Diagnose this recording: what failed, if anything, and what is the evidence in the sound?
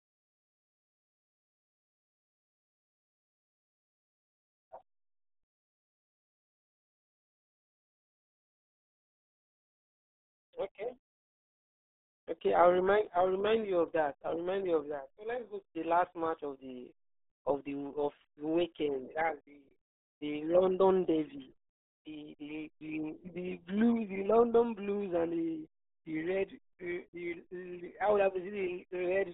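RealAudio 14.4 codec, throughout, at the codec stage: speech sounds muffled and gargly, and nothing passes above 3.8 kHz, which fits an 8 kbit/s dial-up coder.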